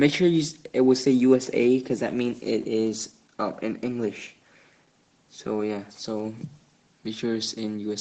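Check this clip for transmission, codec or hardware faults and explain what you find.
No transmission, codec or hardware faults are audible here.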